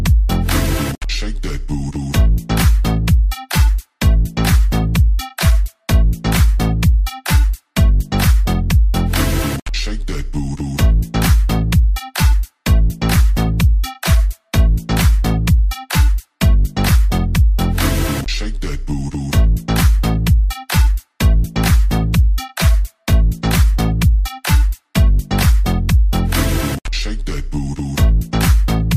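Throughout the clip the resampler is restarted on every block: each 40 ms block is converted on its own, apparently from 44.1 kHz to 48 kHz, so every block edge carries a small error. The result is a steady 25 Hz ticking buzz, present only while sound plays.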